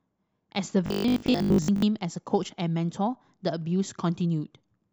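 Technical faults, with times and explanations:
0.86 to 1.86 s, robotic sound from repeated short buffers: For this second the speech turns into a rigid, metallic buzz pitched at 50 Hz. It still roughly tracks the words. The likely cause is new audio arriving too late, so the playback fills the gaps by looping the last fragment. A 50 Hz buzz fits repeats of about 20 ms each. Most of the real audio in this span is skipped and replaced by these copies.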